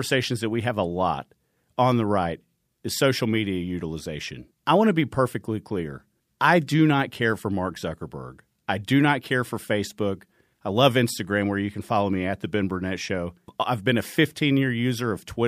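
No technical faults can be heard anywhere in the recording; the signal stays continuous and steady throughout.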